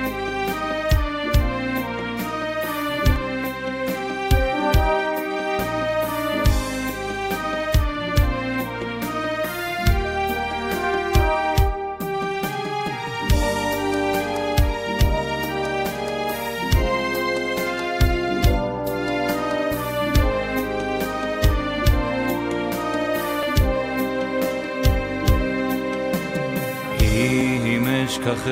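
Overlap between stream segments, whose time stamps point to 2-second segments, makes the player trim sound that was never doubled. At 3.44, 9.44 and 23.43 s, between 6 and 15 ms disappears, so the waveform jumps and each spot gives a brief click or tiny skip.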